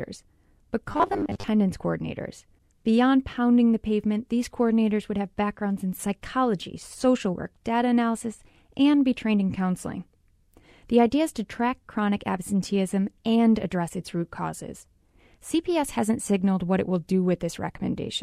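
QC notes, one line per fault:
0.90–1.48 s, robotic sound from repeated short buffers: the speech turns into a rigid metallic buzz at 100 Hz, likely because audio arrived too slowly and a 10 ms slice was replayed in its place, so roughly half the real sound was skipped.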